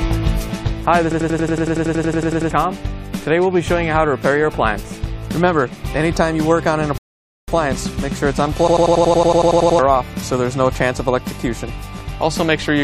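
At 1.12 s the sound locks into a system hang loop that lasts until 2.51 s. The computer or its driver stalled, but the sound hardware kept replaying the same stretch of its ring buffer. One 92.9 ms slice repeats 15 times, at 10.8 Hz. That gives a machine-gun stutter. The loop length fits a 4096-sample buffer. About a second and a half of audio never arrives.

From 6.98 s to 7.48 s there is a rebuffering stall. The player ran dry of downloaded audio and waited for more. The sound drops to silence for 0.5 s, then picks up exactly where it broke off. Nothing is skipped. The clip just runs half a second longer.

The hang loop returns at 8.68 s and runs to 9.79 s. A 92.9 ms slice cycles 12 times at 10.8 Hz, with the same rattling stutter. Roughly a second of audio is lost.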